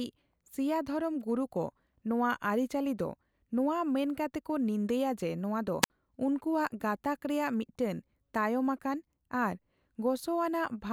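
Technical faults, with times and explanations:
5.82 to 5.90 s, wireless microphone squelch dropout. The radio link fades and static rises briefly. The receiver's squelch then mutes its output, leaving a hole of near silence about 60 ms long. The speech returns once the signal recovers.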